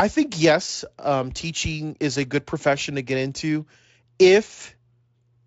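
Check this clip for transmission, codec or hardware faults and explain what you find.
Nothing here points to a transmission, codec or hardware problem; the speech holds together steadily with no dropouts, glitches or distortion to call out, and the Speex coding sounds like a comfortably high quality setting.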